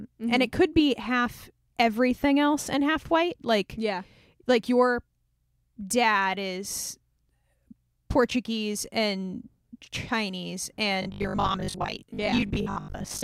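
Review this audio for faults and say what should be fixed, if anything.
From 11.02 to 13.22 s the speech becomes robotic sound from repeated short buffers, a rigid 50 Hz buzz, likely from 20 ms chunks replaying for about half the time. To prevent it, enlarge the jitter buffer and prioritise the audio thread so fresh data always arrives before playback needs it.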